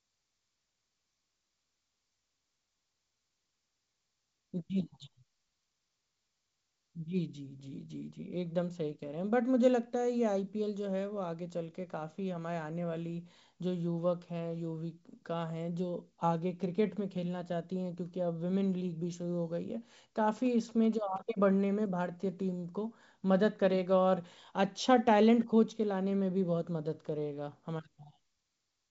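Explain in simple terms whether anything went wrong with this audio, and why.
GSM signalling bursts interrupt the speech from 20.37 to 21.18 seconds. A nearby 2G mobile phone was briefly signalling to its network, sending short groups of radio pulses. The audio circuitry picked up that radio energy and turned it into sound, so for about eight-tenths of a second there's a galloping dit-dit-dit of short buzzes, each one humming at about 217 times a second. It sits quietly beneath the speech rather than drowning it out.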